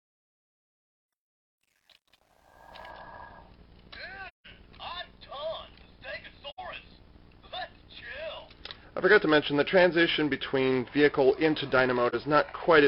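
From 0.0 to 2.90 s, the fade-in sounds gritty, worst until 2.31 s. This is truncation distortion on a fade: the gain stage kept too few bits without dither, which fits roughly 10-bit resolution, so the quietest part of the fade collapses into coarse square steps.

Three soft-edged dropouts follow, at 4.28 to 4.47 s, 6.49 to 6.59 s and 12.09 to 12.14 s. These are AAC frame loss with muting: the decoder zeroed the missing frames' spectrum, and overlapping windows faded the sound out and back in. The gap lengths of about 171, 85 and 43 ms fit four, two and one lost frames.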